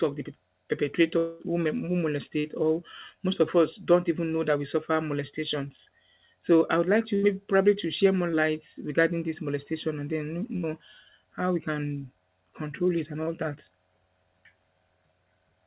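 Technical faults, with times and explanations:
1.18–1.42 s, long network dropout. About 0.22 s of speech is replaced by a fading buzz or hiss, likely from audio that never arrived. Speech resumes further on.
2.40–2.46 s, 5.76–5.87 s, 8.31–8.35 s, 13.23–13.29 s, short concealed packet loss. Each gap of 20 to 40 ms is bridged by continuing the last sound, heard as a brief smear or wobble.
7.15–7.25 s and 10.57–10.65 s, burst of packet loss. About 60 to 80 ms went missing. The receiver held and faded the previous sound before speech jumped ahead.
9.01–11.01 s, timecode bleed. A faint chirping warble near 1 and 2 kHz sits far below the speech, which fits 24-frame linear timecode leaking in.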